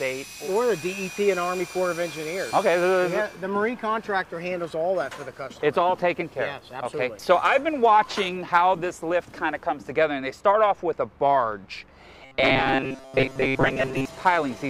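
From 12.23 to 14.05 s, new audio likely stopped arriving on time, and the playback side kept filling each gap by looping its last short buffer of about 7.5 ms while the real audio was skipped, with most of that stretch made of repeats. This is robotic sound from repeated short buffers: the loop imposes a fixed buzz at 133 Hz, so the sound turns rigid and metallic, still loosely tracing its original shape underneath.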